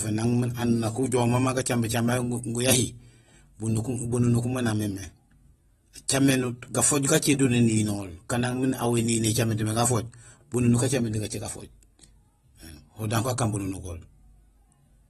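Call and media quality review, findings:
Dull, smeared speech throughout, nothing above 12.4 kHz, warbly fizz on sibilants. Likely AAC compression (AAC-LC): coarse quantisation of the spectrum against a hearing model, which fits a bitrate around 32 kbps. Unlike a plain low-pass filter, artefacts also swirl below the cut-off.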